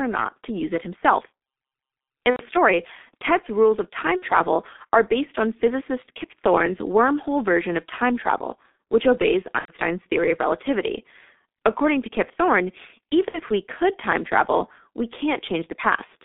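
Speech run through a heavily squeezed G.723.1 codec the whole way, at roughly 6.3 kbit/s. The line only passes about 250 Hz to 3.6 kHz, so everything's thin and boxy with no real low end or air. The codec's slow-moving voice model leaves the speech hoarse and muffled, and consonants smear into each other. That's the low bitrate and long 30 ms frames trading detail for compression. On top of that there are four spots of VoIP packet loss concealed by the speech codec. The first runs 2.30 to 2.44 s. The second runs 4.17 to 4.24 s, right after "rules of". The third runs 9.59 to 9.73 s, between "time travel which obeys" and "theory of relativity". The last runs 13.28 to 13.41 s, just before "we could time travel". In each gap the decoder keeps guessing from its last pitch and filter state, so you get a short buzzy or noisy hold that fades out instead of a clean dropout. The longer gaps sound like about three lost 30 ms frames, and the shorter ones like two. 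The speech also sounds a bit weak and off for a moment after each gap while the decoder catches back up.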